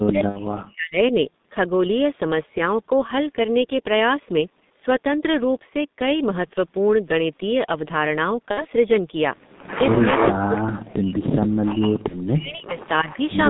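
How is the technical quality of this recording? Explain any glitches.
The quality is poor: heavy low-bitrate codec damage runs through the whole recording, with dropouts, concealed packet losses and a faint late echo on top.

G.723.1 codec, throughout: at about 6.3 kbit/s the speech sits in a narrow 150 Hz to 3.7 kHz line band and sounds muffled and hoarse, with smeared consonants. The codec's slowly updated voice model causes this constant coarseness, unlike the brief, localized faults below.

Speech suppressed in double talk, from 0 to 1.13 s and from 10.32 to 13.09 s: the level drops by up to about 40 dB, and pieces of the voice vanish or thin out. The likely cause is an echo canceller attenuating this side while both parties spoke. These are gain cuts on otherwise intact speech, not a synthetic tone.

VoIP packet loss concealed by the speech codec, at 0.29 to 0.40 s, 8.51 to 8.66 s and 12.08 to 12.20 s: 60, 60 and 30 ms of audio went missing, which fits lost 30 ms codec frames. 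The decoder extended its last pitch and filter, so each gap becomes a fading buzzy tone or coloured noise rather than silence, and the voice stays weak briefly after each one.

Echo leak, at 12.34 to 12.39 s and 12.82 to 13.35 s: a faint copy of the voice returns about 0.3 s late, around 20 to 25 dB below the speech, likely because the far-end loudspeaker's echo was not fully cancelled. Unlike the concealment buzz, it is a delayed repeat of the actual speech.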